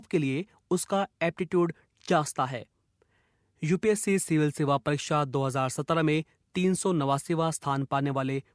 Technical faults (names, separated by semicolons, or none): none